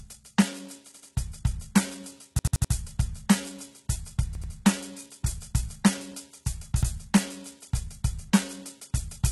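Throughout the music, the treble is likely rebuilt by HE-AAC compression at a very low bitrate, near 16 kbps. Copied upper bands sound gritty and metallic, and nothing is heard above 11.8 kHz.

A repeated buffer, where late audio makes the device replay the same 85 ms piece, fitting a 4096-sample buffer, stutters at 0.94 to 1.11 s, 2.39 to 2.73 s, 4.35 to 4.52 s and 6.83 to 6.91 s, with hard joins.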